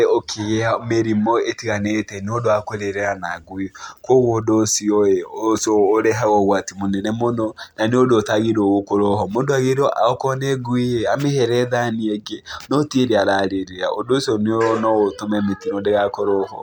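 Speech recording with no technical faults to report.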